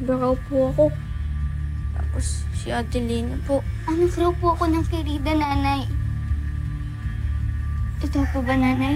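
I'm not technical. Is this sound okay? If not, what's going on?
No. From 5.44 to 5.51 s there is a brief, abrupt dip where the sound suddenly gets quieter, then returns. This is likely one channel drops out: one side of the stereo signal vanished for that instant.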